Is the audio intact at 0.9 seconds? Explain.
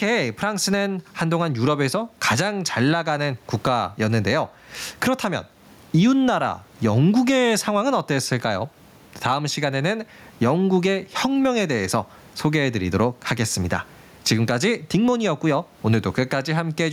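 No. Gain pumping runs through the whole clip, including 0.9 seconds. The gain swings by roughly 15 dB and ducks under each loud sound, likely from excessive input gain clamped by a fast limiter. Unlike a noise gate, the background never cuts to silence.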